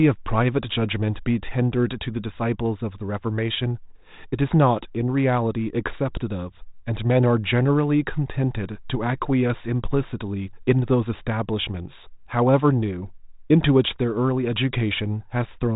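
The speech carries no technical fault, having passed through G.726 ADPCM coding at 32 kbit/s, which leaves only light coding texture and nothing above about 3.8 kHz.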